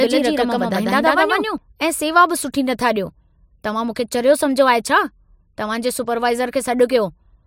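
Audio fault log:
0.00–1.58 s, doubled audio track: the speech is already doubled when the clip begins. A second full-band copy trails the original by roughly 150 ms at about the same level, producing a distinct slapback rather than reverb, with no decay tail or room colouring on the repeat. At 1.58 s the copy cuts out abruptly and a single track remains. The likely cause is the same signal captured twice, once through a slower path, or two misaligned copies left in an edit.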